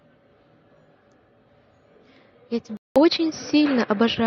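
At 2.77 s a 0.19 s gap, then duller speech, spectrogram empty above 5.9 kHz, faint new noise: likely input switched to a poorer device.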